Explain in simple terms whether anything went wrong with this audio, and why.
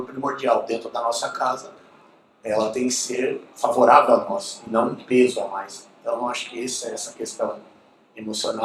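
Something did go wrong, in the timing between the two ends of the connection.

The first problem is clock drift between sender and receiver. Every device keeps time with its own internal clock, and here the sending side's clock runs about 4 percent slow compared with the receiving side. The receiver's small waiting store of incoming audio keeps running low.

The second problem is the receiver's answer to that: repeated timing corrections. From 0.02 s to 8.53 s it keeps quietly repeating tiny slices of sound to fill the gaps, so playback runs at about 95 percent of normal speed. The repeats stretch the audio out by about 0.4 seconds in total. They come at uneven moments.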